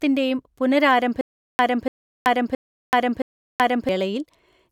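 Playback likely stalled at 1.21 s and kept retrying until 3.89 s, replaying its last fragment at each attempt and then running dry. The result is a stutter with silent gaps in the speech: a 290 ms burst repeats four times at an even 670 ms pace, each separated by about 380 ms of dead digital silence. Whatever speech belonged in that stretch never arrives and is lost.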